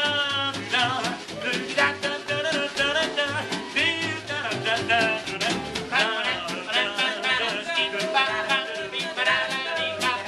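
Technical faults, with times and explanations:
3.66 s and 7.67 s, overlapping chunks: the audio is handled in 4.0-second blocks, and each new block begins about 13 ms before the previous one finished. That short stretch plays twice at each join, producing a brief click or stutter.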